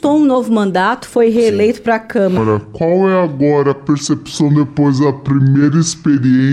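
Section at the wrong speed, 2.37 s to the end: playback runs at 0.627 times recorded speed, likely from a clock mismatch, so the sound drags, dropping about seven semitones.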